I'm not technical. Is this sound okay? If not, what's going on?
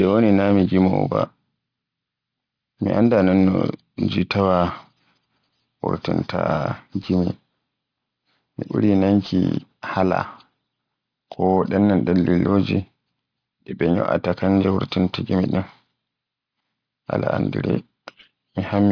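No. The recording's sample rate was lowered without first removing the high frequencies the new rate can't hold, a fault called aliasing. It sounds like a drop to about 11 kHz, so everything above 5.5 kHz folds back down as wrong, unrelated pitches. Throughout the speech, hissy sounds like s and sh come out gritty and metallic instead of clean, and the top of the sound ends abruptly at that fold point.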